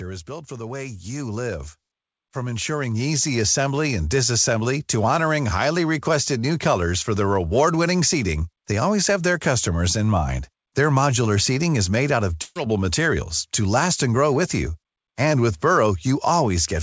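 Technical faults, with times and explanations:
0.25–1.77 s and 2.32–4.06 s, automatic gain rising: the gain control heard a quiet input and eased the level up, about 7 dB then about 6 dB, just before "disassembly to honoring highly".
12.42–12.57 s, burst of packet loss: after "made out of", roughly 140 ms went missing and the last sound was stretched and faded to cover it, then "materials to last and" picks up.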